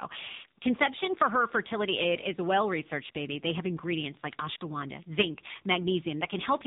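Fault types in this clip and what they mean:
Tandem speech coding, throughout: the speech was decoded and re-encoded at each link border, so each coder works on the previous one's damage. The roughness and warble point to two speech codecs in a row, likely ending in low-rate AMR-NB, with nothing above 3.8 kHz.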